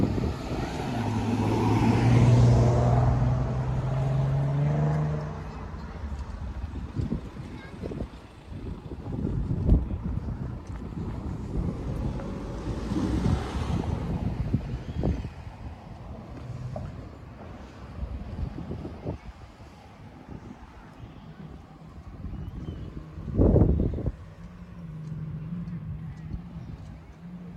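No technical faults can be heard in this audio; the signal holds steady and intact throughout.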